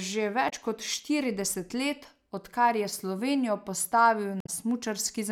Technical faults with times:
0.46-0.52 damaged data in a compressed stream
4.38-4.49 damaged data in a compressed stream

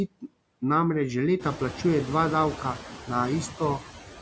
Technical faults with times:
0.00-4.21 noise suppressor artifacts
0.07-0.25 speech cut by the noise suppressor

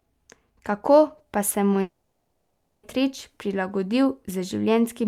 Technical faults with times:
1.81-2.85 long network dropout

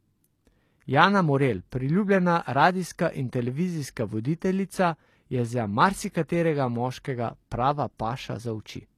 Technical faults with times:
0.00-8.97 HE-AAC compression

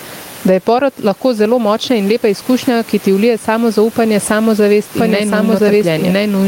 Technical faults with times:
0.00-6.47 gain pumping
4.97-6.47 doubled audio track

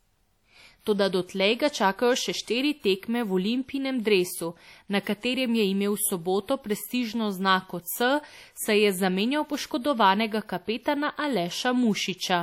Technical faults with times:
0.00-12.42 low-bitrate audio saved at a high bitrate

